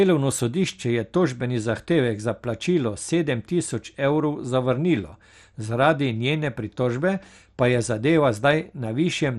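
Across the whole recording the speech sounds dull and muffled, with nothing above about 13.6 kHz, and a gurgling, granular roughness clings to it. Upper frequency bands seem to flicker in and out as the sound changes, and what remains has a coarse, grainy texture. The likely cause is MP2 compression: with too few bits to go round its sub-bands, the encoder drops the top bands and quantises the rest crudely. The damage is plainly audible and fits a low bitrate of around 64 kbps.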